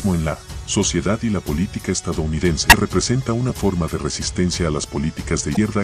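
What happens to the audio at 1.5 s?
Nothing goes wrong at 1.5 s; the audio plays through that moment without interruption or damage.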